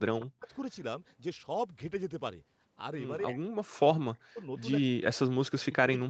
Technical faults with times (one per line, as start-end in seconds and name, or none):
0.00-0.54 speech suppressed in double talk
3.21-4.51 speech suppressed in double talk
4.58-4.62 echo leak
4.88-6.10 speech suppressed in double talk